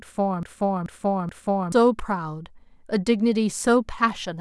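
From the first instant until 1.72 s the speech is caught in a broken-record loop, already running when the clip opens: a 0.43 s fragment repeats exactly, back to back, three times. The likely cause is a stalled player, encoder or stream resending its last buffer, so the speech due in that span is lost.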